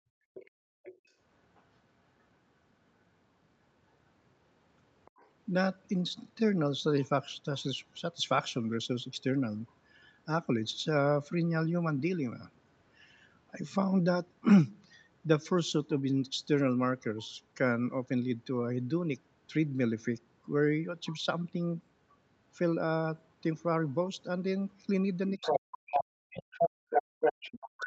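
From the start to 1.06 s the room background is gated by the echo canceller. While the far-end loudspeaker signal is active, the canceller clamps the microphone gain, so the ambient bed drops by about 37 dB in brief holes adding up to around 0.7 s, then recovers once the canceller releases. The background sounds like it switches off and back on.

Overlapping this, from 0.34 to 1.62 s, the other side's voice is leaking through at roughly 20 dB below the near-end speech. The likely cause is residual echo. The loudspeaker output reaches the microphone and the canceller does not fully subtract it, leaving a faint second voice in the background. The same leak returns from 5.05 to 7.62 s at roughly 30 dB down, and as a short fragment from 21.05 to 21.15 s at roughly 25 dB down.

From 25.36 s to the end, the near-end speech is suppressed in double talk, with the level pulled down by up to roughly 40 dB. 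This is likely because both sides speak at once and the canceller, unable to separate its own talker from the echo, attenuates everything. The talker's voice ducks and breaks up. From 25.41 s the other side's voice leaks in at about the same level as the speech, so the two compete directly. Within that stretch, the background is gated again from 26.85 to 27.2 s, dipping by about 37 dB for around 0.2 s.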